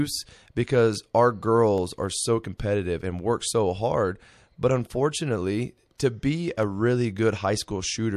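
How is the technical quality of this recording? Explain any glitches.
The recording has two kinds of glitch: two isolated clicks and two smeared attacks with a brief hiss ahead of them.

The clicks, at 1.78 s and 6.63 s, are most likely dropped samples. A fraction of a millisecond of the stream goes missing, and the waveform jumps straight from one value to a later one. Nothing audible is removed, but the sudden step produces a single sharp click, visible as a thin vertical line through the spectrum.

The smeared attacks, at 2.58 s and 5.98 s, are pre-echo from a transform codec working in 36 ms blocks that never switches to shorter blocks for transients. Each sharp onset arrives late in its block, and the quantisation noise sized for that loud moment spreads back over the quiet lead-in: about 19 ms at 2.58 s with noise up by about 11 dB, and about 11 ms at 5.98 s with a rise of about 13 dB. 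Each attack is preceded by a short hiss and sounds softened.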